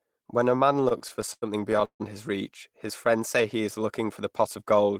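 Packets reaching the receiver late or more slowly than they were played let the jitter buffer run dry repeatedly in this speech recording, giving repeated stalls (stutter) from 0.73 to 2.02 s. Across 15 separate gaps the receiver stretched the last sound to cover about 383 ms in total, roughly 30% of that stretch, with the longest hold lasting 151 ms. Nothing is lost, but the speech drags and stutters through this passage.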